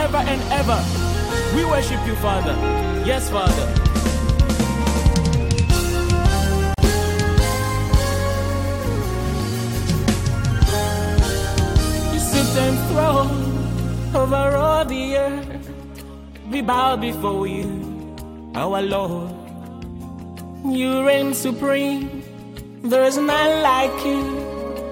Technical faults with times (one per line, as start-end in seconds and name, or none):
6.74-6.78 gap at a join of encoded pieces